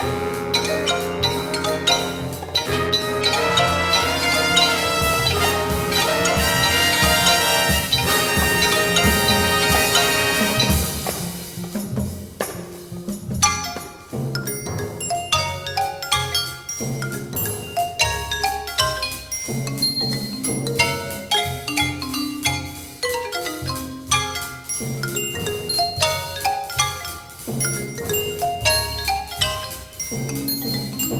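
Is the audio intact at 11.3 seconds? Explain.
Yes, at 11.3 seconds the audio is intact, with no dropout, click, distortion or other fault to be heard at that point.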